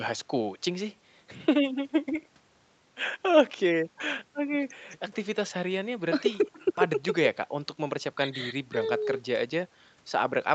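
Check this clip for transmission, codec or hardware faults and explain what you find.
No transmission, codec or hardware faults can be heard in this speech clip. The sound stops at about 8 kHz, which fits the band limit of the call's microphone processing and a wideband call codec working normally.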